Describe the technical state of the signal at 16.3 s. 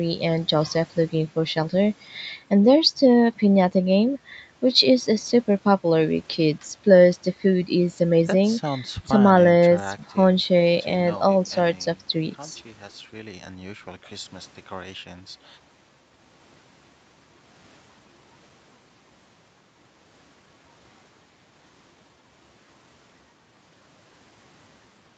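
At 16.3 s the speech is intact, with nothing beyond the normal band-limiting and coding of the call path, which leaves nothing above 8 kHz.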